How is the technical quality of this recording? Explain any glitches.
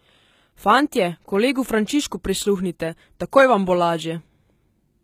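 The recording has plainly audible coding damage throughout. The likely cause is HE-AAC compression, running through the whole clip. The treble is not the original. It has been rebuilt by copying lower bands upward and shaping them coarsely. Harmonics in that region no longer line up with those below. S sounds come out gritty, metallic or lispy. Nothing remains above 14.9 kHz. The damage fits a low bitrate around 20 kbps.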